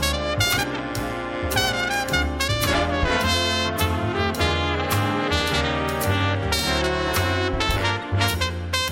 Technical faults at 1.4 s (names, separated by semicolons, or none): none